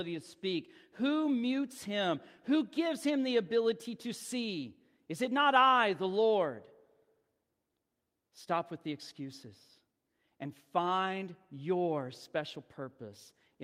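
Listening to the speech recording, nothing stood out as a technical fault at any point.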